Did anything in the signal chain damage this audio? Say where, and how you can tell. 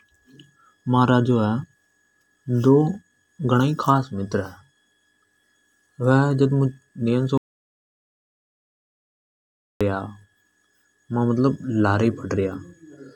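Yes. The speech drops to silence from 7.38 s to 9.81 s, about 2.43 s with no room tone, then resumes mid-flow. This audio dropout to silence likely comes from a lost input or link upstream of the recorder, which kept writing silence.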